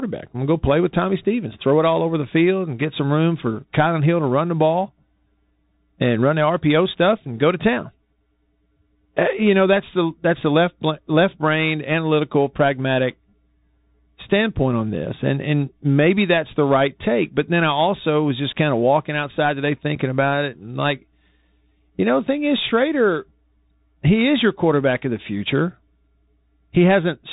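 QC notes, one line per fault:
Throughout: Bluetooth CVSD headset codec. The speech is confined to a narrow telephone band, with nothing above about 4 kHz, so it sounds thin and boxed-in. A granular hiss sits under the voice. Sibilants come out scratchy, and louder, brighter syllables distort where the one-bit delta modulator's adaptive step cannot slew fast enough to follow the waveform. The damage is plainly audible and fits a 64 kbps CVSD headset link.
19.95 s: unconcealed Bluetooth headset packet loss. Between "of walking outside today" and "about it and like", roughly 7.5 ms of audio drops out. That is consistent with a single lost headset voice packet being replaced by silence rather than concealed. The gap has hard edges, and the speech resumes momentarily quieter while the CVSD decoder's step size recovers from the interruption.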